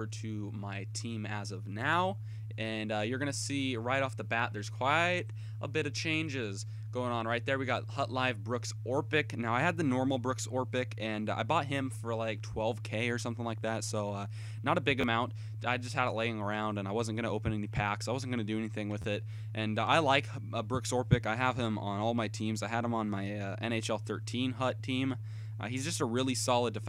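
There's a repeated buffer twice in this audio, at about 15.01 to 15.04 s and again at 19.02 to 19.04 s. Each time fresh audio didn't reach the device soon enough, so it replayed the last 11.6 ms chunk two extra times, which fits a 512-sample buffer. Those back-to-back copies with hard joins come across as a quick click-buzz rather than an obvious stutter, and roughly 20 ms of real audio goes missing at each spot.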